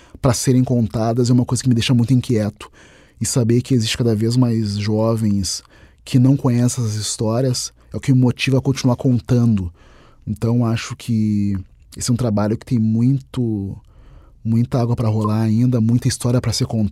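A compressed frame with flipped bits reached the decoder, which played it anyway, at 15.24 to 15.27 s of the speech: a corrupt frame decoded. Misread gains and codes put energy at wrong frequencies for roughly one frame, giving a short blip with its error peaking near -15 dBFS.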